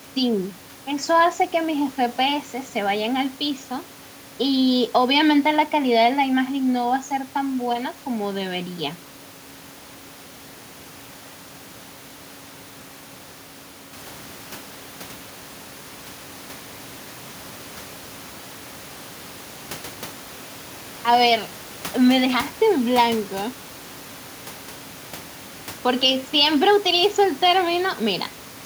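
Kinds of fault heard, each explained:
No system faults can be heard in the speech. Background noise from the room sits about 23 dB below the speech, jumps by about 19 dB at around 14 seconds, and after that stays about 22 dB below the speech.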